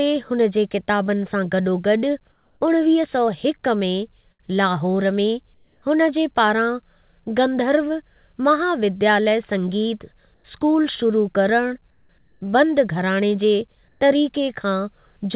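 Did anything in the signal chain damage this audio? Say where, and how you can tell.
Yes. In the call processing stage, the pauses at 2.32–2.61 s after "जे किताबनि सां गॾोगॾु", 5.54–5.82 s before "हुन जे", 10.34–10.44 s, 11.91–12.09 s, 12.18–12.41 s, and 13.88–14.01 s after "घराणे जे" carry comfort noise in place of the background. The real background, about 43 dB below the loudest speech, turns steady and featureless, up to about 2 dB quieter. The sender likely stopped transmitting during silence, and the receiver synthesised the fill.

At the network stage, a burst of packet loss hits at 4.32 s for about 80 ms. The receiver extends the last sound for roughly 72 ms and fades it. Speech then resumes with a short stretch missing. All of this sits on a band limited to 4 kHz, which fits a narrowband call codec.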